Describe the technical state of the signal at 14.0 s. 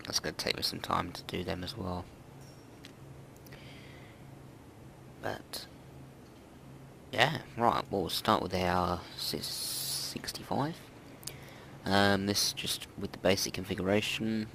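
Nothing is wrong with the signal at 14.0 s; the audio there is intact.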